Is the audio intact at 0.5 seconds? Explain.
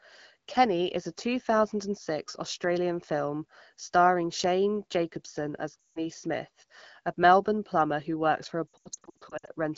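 Yes, at 0.5 seconds the speech comes through intact, with no fault at that moment.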